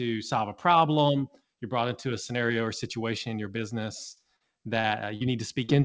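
Speech carried over a call path that keeps nothing above 8 kHz, consistent with G.722 at 64 kbps. At 4.12 to 4.19 s a burst of packet loss briefly continues the last sound and fades it, then resumes about 40 ms further on; the receiver filled roughly 45 ms while the intervening audio was lost. Four short concealed packet losses follow, at 4.36, 4.80, 5.16 and 5.64 s. Each is a brief smear or wobble where about 40 ms never arrived and the receiver extended the preceding sound for 37 to 44 ms before blending back.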